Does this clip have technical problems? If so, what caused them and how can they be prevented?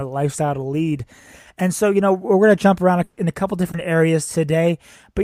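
Yes. There is a burst of packet loss from 3.03 to 3.19 s, just after "going to jump around". About 140 ms of audio failed to arrive in time. The receiver stretched the last sound to fill that span, fading it as it went, so there is no silence. Playback then resumes at "in a couple", with the 140 ms in between missing. A larger jitter buffer, or forward error correction on the network path, would prevent it.

A short concealed packet loss follows from 3.71 to 3.75 s, just after "around in a couple". Roughly 20 ms never reached the decoder in time. The receiver covered the hole by extending the preceding sound, then blended back into the real signal. The result is a brief smear or wobble, and a short sound could drop out there. Reducing network congestion or adding packet redundancy would prevent it.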